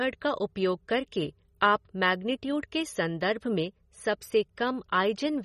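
Throughout the speech, MP3 compression damage is plainly audible: a watery, swirling quality where weak frequency components flicker on and off between frames, with smeared consonant attacks. A spectrogram shows a hard ceiling near 15.2 kHz and patchy, blocky holes below it, which likely points to a low bitrate around 32 kbps.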